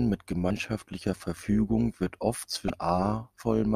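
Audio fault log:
throughout: overlap-add ripple. The speech was split into windowed frames and rejoined with an overlap that doesn't sum to a constant gain, so the level swells and dips by about 6 dB once per frame, around 150 times a second, giving a metallic buzz with extra tones around each note.
0.47–0.51 s and 2.67–2.70 s: damaged data in a compressed stream. Corrupted bytes made the decoder misread these frames and lose sync while it hunted for the next valid header, so each spot produces a brief glitch lasting about 30 ms.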